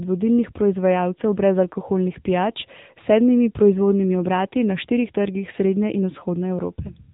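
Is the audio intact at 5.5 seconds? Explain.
No. The AMR narrowband mobile codec runs throughout, removing everything above 3.8 kHz. Its pulse-driven vocal-tract model gives a buzzy, synthetic voice that a plain band-limit wouldn't, which fits roughly 8 kbps.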